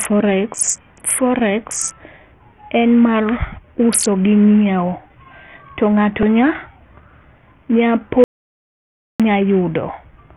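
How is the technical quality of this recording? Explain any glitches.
The recording is technically poor: heavy codec damage throughout, plus two timed glitches.

Bluetooth SBC compression is the likely cause of the damage. Nothing survives above 12.1 kHz, and the remaining treble sounds gritty and coarse, which fits a starved bit pool near 48 kbps. The upper sub-bands get almost no bits, so the top end drops away and quantisation noise rides on the speech.

A repeated buffer at 6.23 s plays one tiny slice three times in a row with hard joins. It comes across as a brief click or buzz rather than a stutter. The piece is so short it fits a 128-sample buffer, and essentially no audio is lost.

An audio dropout to silence runs from 8.24 s to 9.20 s, about 0.96 s. The speech cuts out completely, with no room tone, then resumes mid-flow. The cause is likely a lost input link while recording continued writing zeros. 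Whatever was said in that gap is gone.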